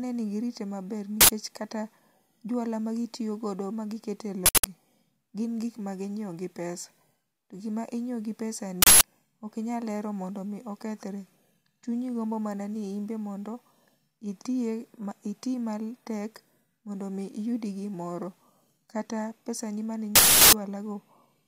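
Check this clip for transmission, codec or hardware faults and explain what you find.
There is one hardware or driver fault in this speech: an uninitialised buffer, heard four times. In each case the playback path sent out a block of memory before any audio had been written into it, so leftover data was played as samples. The result is a sudden, loud burst of digital noise that replaces the speech for the length of one block.

The first burst runs from 1.21 to 1.30 s, between "girite maber" and "kata juala magitiyo godo". It lasts 93 ms, which fits a 4096-sample buffer. Bursts of 186 ms, which fit an 8192-sample buffer, follow at 4.46 to 4.64 s, just after "magitiyo godo magi kete", and at 8.82 to 9.01 s. The last and longest runs from 20.16 to 20.53 s, right after "pesani mane". It lasts 372 ms, which fits a 16384-sample block.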